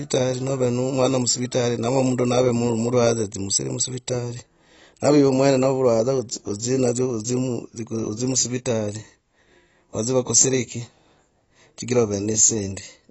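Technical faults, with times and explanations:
Throughout, AAC compression: nothing above 8 kHz, with dull, smeared speech and plainly audible codec damage, likely AAC-LC at a low bitrate around 24 kbps.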